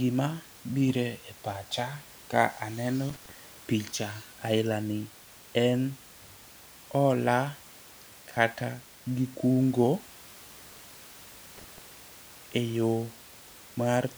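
At 3.09 s, just after "bire pacha ka aneno", an intermittent contact breaks the signal: a loose connection opens for about 94 ms, the speech drops out with crackle at both edges and faint hiss in the gap, and it returns before "picha aila ni" by 3.31 s. The same fault recurs at 11.58 s with a longer open of about 140 ms, ending by 11.82 s. Room noise sits about 23 dB below the speech.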